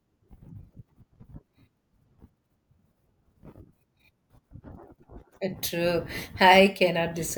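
No glitches turn up anywhere in this recording, so there's nothing to point to along the way.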